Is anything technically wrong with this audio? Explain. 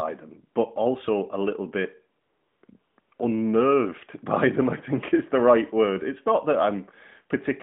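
Yes, there's AMR comfort noise breaking into a short pause in this speech, carried over a narrowband phone line that tops out around 3.5 kHz.

It cuts in from 2.22 to 2.62 s, at 2.66 s, then 2.80 to 2.98 s, 3.00 to 3.12 s and 3.14 to 3.20 s. The phone decided nobody was talking, stopped sending speech frames, and the far end filled in a smooth synthetic hiss, so the real background flickers on and off.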